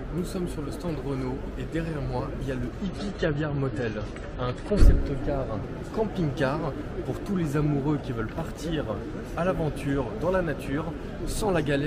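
From 2.82 to 4.82 s the adaptive stream drops to a lower bitrate, probably around 32 kbit/s: treble vanishes above 11.5 kHz, artefacts thicken, then quality snaps back with no gap.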